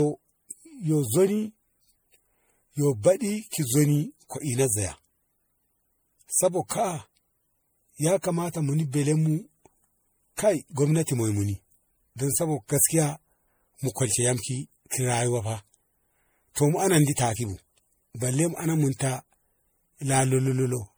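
A speech recording carrying generation loss for its whole length: the sound is swirly, smeared and hollow, with blurred consonant attacks. The cause is likely repeated lossy re-encoding, roughly four passes, in a chain that fits 64 kbit/s MP3, each pass adding fresh quantisation noise and spectral holes. What separates this from a single low-bitrate encode is that the damage exceeds what that bitrate alone would give, while content still reaches about 20.9 kHz.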